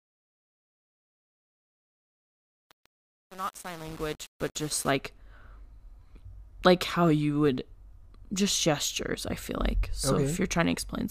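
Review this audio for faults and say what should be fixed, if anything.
Truncation distortion on the fade runs from 0.0 to 4.91 s. The fade stage drops bits without dither, consistent with about 7-bit resolution, so the quiet speech collapses into coarse square steps and sounds gritty. Unlike clipping, the grit worsens as level falls and clears as the fade reaches full level. Applying the fade at full word length and adding dither before any reduction in bit depth would prevent it.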